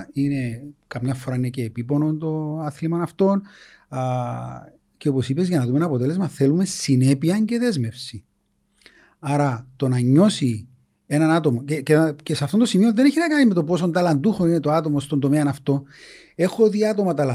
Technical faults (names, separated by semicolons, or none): none